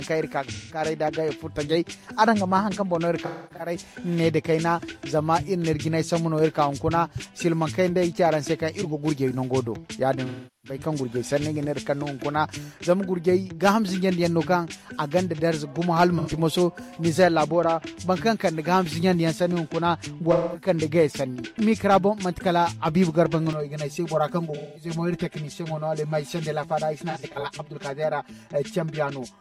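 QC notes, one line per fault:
0.52–0.80 s, 3.25–3.75 s, 10.25–10.79 s, 16.18–16.29 s, 20.32–20.68 s, 24.54–24.90 s, 27.10–27.47 s, AAC frame loss with concealment: brief smeared, noisy patches where the decoder rebuilds missing frames from the last good spectrum. The 10.25 s gap is longest. The 27.10 s loss comes in short broken bursts.
23.53 s to end, channel delay (comb filtering): one channel arrives roughly 5 ms late and sums to mono, cancelling shared content at fixed notches from near 100 Hz, spaced about 200 Hz apart. The result is a continuous hollow, phasey colour rather than momentary dropouts.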